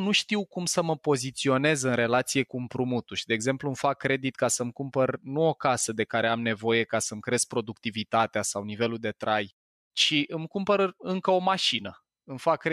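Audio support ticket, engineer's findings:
No faults found; no symptom, probable component or mechanism to report.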